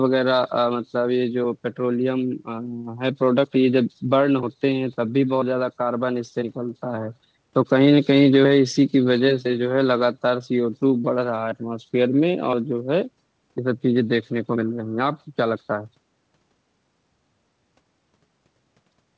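No faults in this speech.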